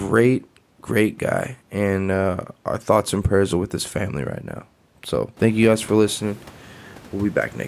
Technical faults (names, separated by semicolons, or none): none